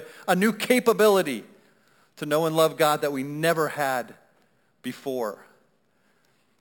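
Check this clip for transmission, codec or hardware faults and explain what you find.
There is one fault, present through the whole speech clip. A bright, metallic fizz rides on the speech at about 18 dB below it, rising and falling with the talker and filling roughly 6 to 12 kHz, with the lowest copy moving opposite to the pitch. This is imaging from sample-and-hold upsampling. Each sample was simply repeated with no smoothing filter, which fits a 12 kHz source raised to 48 kHz, so mirrored copies of the spectrum sit above 6 kHz.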